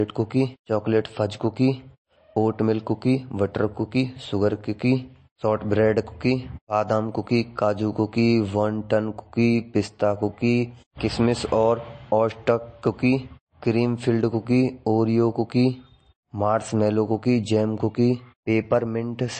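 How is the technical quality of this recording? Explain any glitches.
The technical quality is compromised by MP3 compression that is plainly audible for the whole clip. Nothing survives above 8.3 kHz, so the speech sounds dull, and the quieter detail swirls and turns watery as weak frequency lines drop in and out, likely from encoding at roughly 34 kbps.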